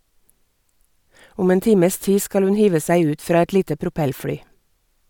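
A speech recording with no audible technical faults.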